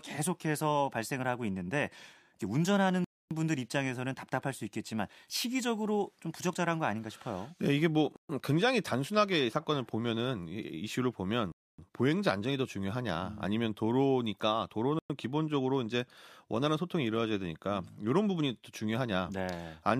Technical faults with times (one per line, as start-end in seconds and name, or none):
3.04-3.31 Bluetooth stall
8.16-8.29 Bluetooth stall
11.52-11.78 Bluetooth stall
14.99-15.10 Bluetooth stall